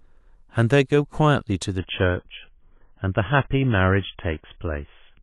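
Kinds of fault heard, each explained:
Adaptive stream at a lower bitrate: from 1.78 s to the end, the speech abruptly loses everything above 3.5 kHz and turns dull and smeared, with no gap. This points to the stream switching to a much lower-bitrate MP3 version, roughly 20 kbit/s, when the connection slowed.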